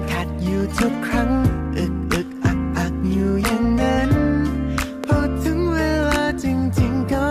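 A loud pop lands at about 5.04 s, a single sharp hit lasting roughly 20 ms and sitting well above the sound, around 15 dB hotter. It's likely a voltage spike from a plug, switch or static discharge, and the audio carries straight on underneath it.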